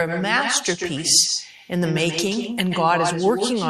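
Throughout the speech, an echo with no canceller returns each phrase as a distinct, thinner copy about 150 ms later, roughly 6 dB below the original. Its far-end loudspeaker feeds the microphone unremoved; unlike room reverberation, the repeat arrives separately rather than decaying smoothly.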